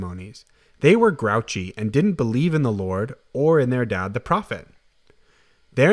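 Nothing goes wrong anywhere in this bit of speech, so there's no technical fault to point out.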